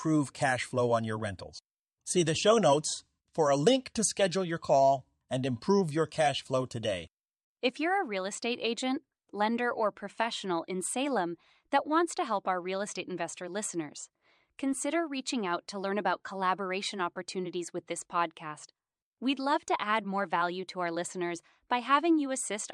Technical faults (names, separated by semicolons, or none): none